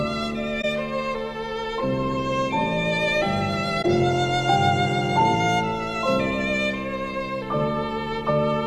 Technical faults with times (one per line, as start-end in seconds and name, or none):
0.61-0.65 corrupt frame concealed
3.82-3.85 corrupt frame concealed